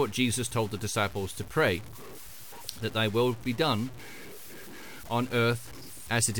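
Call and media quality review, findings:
Low bit depth without dither, whole clip, speech. Gritty, grainy distortion riding on the voice and changing with it, harshest on quiet syllables and decays, where the tail sputters or drops to silence. Error sits roughly 20 dB under the signal. Likely a truncating requantiser with no dither, and the coarseness fits about a 6-bit path. Worth checking any gain or format conversion stage that simply chops off the low bits.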